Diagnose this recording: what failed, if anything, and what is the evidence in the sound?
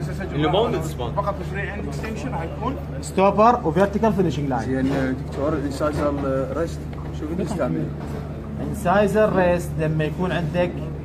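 No fault is audible.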